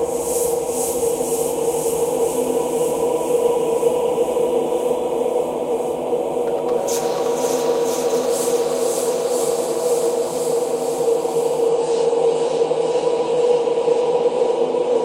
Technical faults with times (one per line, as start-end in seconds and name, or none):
11.68-15.05 adaptive stream at a lower bitrate